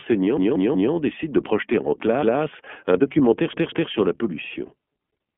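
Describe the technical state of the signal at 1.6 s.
At 1.6 s the speech runs through an iLBC codec, coding each 30 ms frame independently within a 200 Hz to 3.4 kHz band, so it sounds muffled, slightly rough and synthetic.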